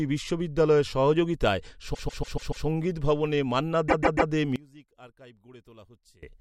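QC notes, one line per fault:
1.93–2.65 s and 3.88–4.31 s, repeated frames: after "বিশ্ববিদ্যালয়ের সহযোগিতায়" a 144 ms block plays five extra times, and after "ভবনে মান্না" three extra times, adding 0.72 s and 0.43 s. This heard as a stutter; the spectrogram shows identical tiled blocks.
4.56–6.23 s, one channel inverted: after "ভবনে মান্না দে" the mono sum drops by about 24 dB, leaving a faint residue, likely from reversed polarity on one channel. The waveform envelope visibly collapses.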